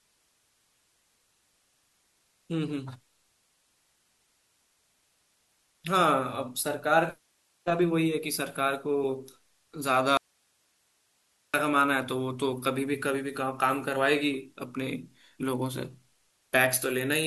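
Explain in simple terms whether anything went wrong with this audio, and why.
Something did go wrong here: there's an audio dropout to a faint residue from about 10.17 to 11.54 seconds. The speech suddenly vanishes for roughly 1.4 seconds, and all that's left in the gap is a soft hiss, far quieter than the talking. Then it snaps right back. It's too abrupt to be a natural pause or a fade. The likely cause is the signal being lost for a moment while the recording line itself stayed live.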